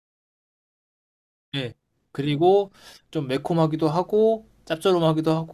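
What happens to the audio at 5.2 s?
Nothing goes wrong at 5.2 s: the speech continues intact there, with no dropout, click, distortion or other fault at that moment.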